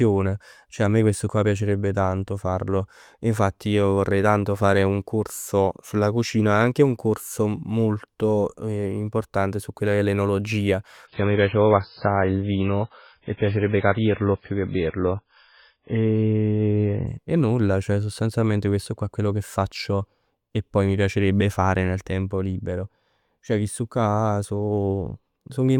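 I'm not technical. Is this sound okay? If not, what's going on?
No. From about 11.07 to 17.07 seconds, right after "quella che è l'enologia", the speech turns dull and a bit watery, then snaps back at "nulla sostanzialmente questo qua". That's an adaptive stream at a lower bitrate: a slow connection made it switch to a much smaller version for six seconds.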